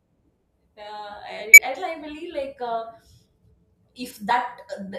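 Damaged data in a compressed stream shows up twice in this speech clip, first from 1.53 to 1.58 s and again as a brief blip at 4.30 s. At both points part of the encoded stream was corrupt, so the decoder misread the affected frames, lost its place and had to hunt for the next valid frame header before normal decoding resumed. Each event is heard as a short disturbance, a chirp, squawk, click or brief hole, breaking into the speech, the first lasting about 50 ms and the second much shorter.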